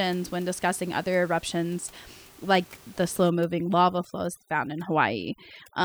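Speech recorded over room noise about 26 dB below the voice. From 3.30 s to the end, just after "eruptions like the slow", the background sinks and breaks into twinkling, warbling specks, and quiet parts of the speech vanish with it. This is overdone noise removal: a noise reducer set too strong cuts individual frequency bands near its noise estimate, taking low-level speech detail along with the background noise.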